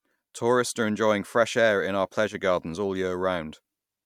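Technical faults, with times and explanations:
2.28–2.35 s, one channel drops out: right after "fresh air in our", the speech dips abruptly by about 6 dB for roughly 70 ms, then snaps back before "gardens all". That's likely one stereo side briefly going silent, so the mono sum loses half its shared signal.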